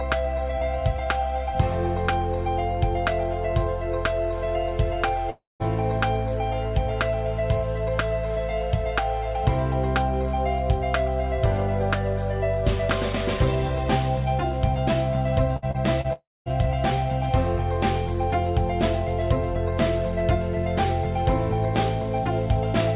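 At 5.30 to 5.63 s the sound is held as a fading buzz or hiss that gives way to about 0.18 s of silence. About 0.3 s never returns. This is likely a long network dropout, set apart by that dead-silent tail.

At 15.57 to 15.65 s a burst of packet loss removes about 60 ms. The last sound is stretched and faded before the audio resumes.

At 15.71 and 16.01 s, short concealed packet loss replaces about 30 ms each time. These are brief smears or wobbles that blend straight back, much shorter than the burst.

At 16.13 to 16.49 s a second likely long network dropout loses about 0.33 s. The fill decays into roughly 0.22 s of silence.

Throughout, the call path passes nothing above 4 kHz, which fits G.711 A-law at 64 kbps.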